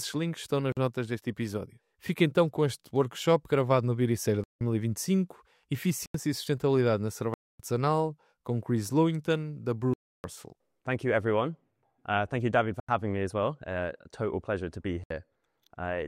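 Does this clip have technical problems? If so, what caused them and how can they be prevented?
Yes. Blocks of digital silence occur at 0.72, 4.44, 6.06, 7.34, 9.94, 12.80 and 15.04 s, lasting 46 to 305 ms. The program likely failed to fill its output buffer in time; the 85 and 171 ms holes fit 4096- and 8192-sample blocks at 48 kHz. Larger buffers and keeping other processing off the audio thread prevent this.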